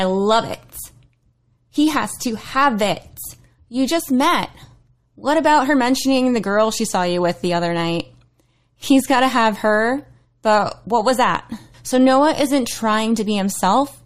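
Nothing in the speech stood out as a technical problem on listening.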